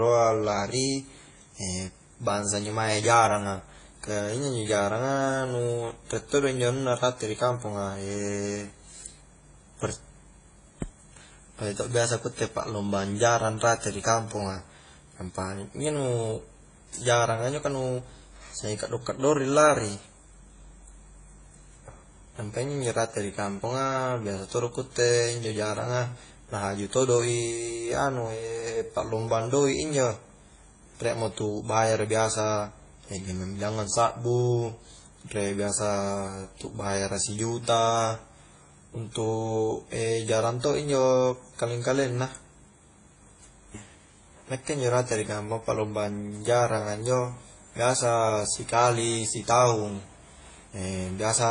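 Throughout the speech, nothing is heard above 10 kHz. The artefacts of two different codecs are heard layered together. This is likely transcoding between lossy codecs. The mixed artefacts fit a low-rate WMA encode re-encoded to AAC-LC at around 24 kbit/s.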